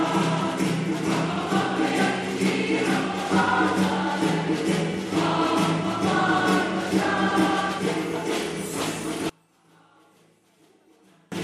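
From 9.29 to 11.32 s the sound collapses to a faint residue, dropping by about 31 dB, the signature of one channel inverted. The likely cause is one stereo channel's polarity flipping, so material common to both sides cancels when they sum to mono, leaving only their small differences. On a waveform the envelope shrinks to a thin sliver across that span. A spectrogram shows the remaining energy dim and sparse.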